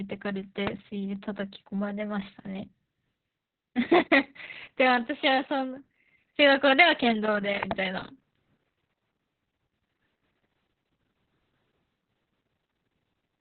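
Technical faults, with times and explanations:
throughout: Opus voice compression, heavy, in narrowband SILK mode. The speech is muffled, hoarse and slightly robotic, fitting about 6 kbps. A spectrogram shows nothing above 4 kHz.
0.67–0.69 s: loud pop, a single sharp click about 15 dB above the speech, likely a voltage spike from static or a switch. The waveform shows one tall narrow spike, and the spectrogram shows a vertical line.
7.63–7.73 s: loud pop, doubled, two quick thumps about 15 dB above the speech, likely a plug or driver glitch. The waveform shows twin spikes, and the spectrogram shows two vertical stripes.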